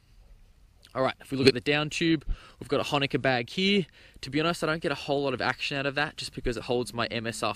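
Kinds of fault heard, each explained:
corrupt frame decoded: damaged bits in a compressed frame were decoded anyway, misplacing energy across frequencies, giving a brief burst near 1.42 to 1.51 s, peaking around -10 dBFS.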